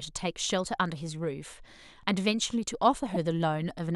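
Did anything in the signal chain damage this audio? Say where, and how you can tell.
Yes, at the codec stage: corrupt frames were decoded, heard as a faint glitch at 0.51 s (about -35 dBFS) and a louder glitch from 3.14 to 3.17 s (about -20 dBFS). Flipped bits in a few compressed frames were decoded anyway, putting energy at wrong frequencies.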